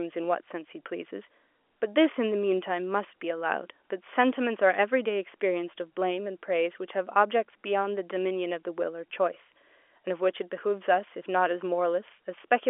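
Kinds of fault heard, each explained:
No kinds of fault can be heard in the speech. The telephone path behaves as a working G.711 line should, with the sound held to the narrow band of roughly 300 Hz to 3.4 kHz.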